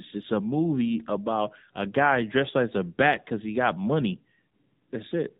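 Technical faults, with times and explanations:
Throughout: AMR narrowband mobile codec. Nothing above 4 kHz gets through, and the speech comes out buzzy and synthetic, which fits a low AMR-NB mode around 7.4 kbps.
4.49 to 4.54 s: lost AMR speech frames. There's a brief 40 ms dip and warble, consistent with two lost 20 ms frames. The decoder patched the gap by reusing the last pitch and vocal tract settings at falling gain.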